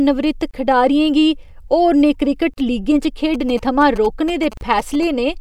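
At 0.51 s the speech drops out for about 27 ms, a gap at a join of encoded pieces, just before "खडारियें गी होरनें". It recurs after those same words at 2.54 s for about 38 ms and again at 4.57 s for about 38 ms, roughly every 2 s. Each segment was encoded on its own and joined untrimmed, so encoder start delay and last-frame padding leave silence. It sounds like a brief stumble. On a spectrogram it shows as a thin blank vertical band across all frequencies, and on the waveform as a flat line with slightly softened edges.

From 3.34 to 5.04 s, GSM signalling bursts sit well below the speech level. A nearby 2G phone is exchanging short radio bursts that the audio circuit rectifies into a galloping dit-dit-dit of short buzzes repeating at 217 Hz. The spectrogram shows a comb of harmonics at multiples of 217 Hz, broken into pulsed clusters, and the waveform shows regular spiky trains riding on the speech.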